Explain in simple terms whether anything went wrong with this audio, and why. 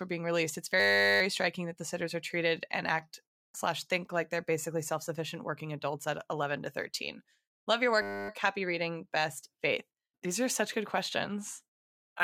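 Twice the speech freezes into a steady buzz: from 0.8 to 1.21 s, after "being released it's", and from 8.02 to 8.29 s, after "love your". That's a system hang loop. The computer stalled while the sound hardware kept replaying one 10 ms scrap, about 100 times a second.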